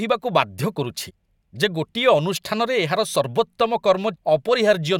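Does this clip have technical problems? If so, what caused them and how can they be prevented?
Yes. Damaged data in a compressed stream causes two brief glitches in the speech, heard as a chirp, squawk, click or short hole, at 1.09 to 1.11 s and 4.14 to 4.16 s, where corrupted bytes made the decoder misread frames, lose sync and hunt for the next valid frame header. Checksummed transfer and storage, with verification of the file before playback, prevents this.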